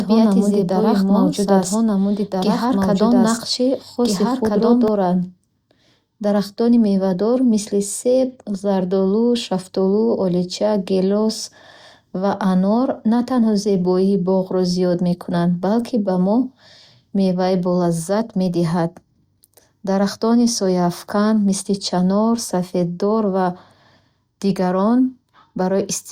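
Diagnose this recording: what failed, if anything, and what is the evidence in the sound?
Until 4.88 s an equally loud copy of the speech trails roughly 1.5 seconds behind, then cuts off abruptly: a doubled audio track, likely from a slower second capture path.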